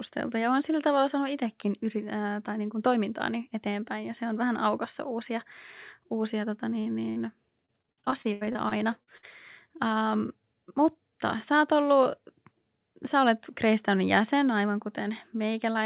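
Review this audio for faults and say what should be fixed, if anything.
Burst of packet loss: right after "uusia tota", a run of about 60 ms of packets went missing at 6.80 to 6.88 s, and again at 7.10 to 7.18 s. The receiver stretched the last sound across each hole and faded it, giving a held buzz or dying hiss before speech resumes with a piece skipped.

Short concealed packet loss: immediately after, at 7.18 to 7.22 s, about 20 ms failed to arrive in time. The decoder patched it by extending the preceding sound and blending back, heard as a brief smear where a small bit of speech is lost.

Repeated packet loss (robotic sound): from 7.66 to 9.25 s the stream dropped packets 14 times, the longest gap 83 ms, with about 27% of that stretch concealed. Hole after hole patched this way makes the speech choppy, with fragments missing, all within the G.711 path's band that stops at 4 kHz.

To fix this, stabilise the network route or add forward error correction and a deeper jitter buffer so bursts of late or lost packets are recovered rather than concealed.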